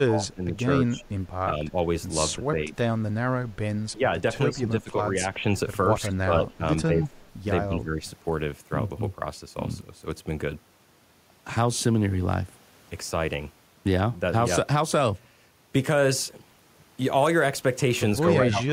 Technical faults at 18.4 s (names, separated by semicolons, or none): speech suppressed in double talk